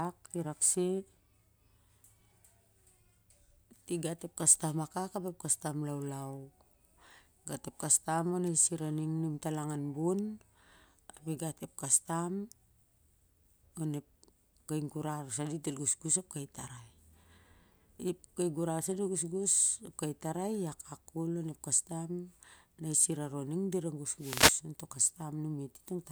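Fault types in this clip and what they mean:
Wireless microphone noise hit: the analogue FM radio link from the microphone briefly fades when reflected signal paths cancel each other, and receiver noise rises over the speech. It is heard as a very short swish at 8.45 to 8.50 s and a longer burst of static from 24.18 to 24.60 s. On a spectrogram each shows as a broadband vertical band of noise. The waveform shows a rough, hissy patch overlaying the speech.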